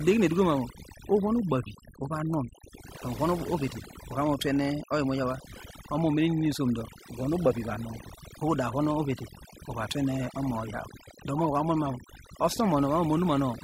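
From start to finish the speech carries overdone noise removal. Bands near the noise estimate are pushed down or cut, so the background drops to near silence with twinkling specks. A spectrogram shows a blank floor sprinkled with isolated dots.

A corrupt frame decoded at 3.89 to 3.94 s, spanning about two frames, gives a faint glitch. Another at 11.38 to 11.46 s, about three frames, is a much louder glitch. Damaged codes misplaced energy, showing as short, out-of-place spectral blocks.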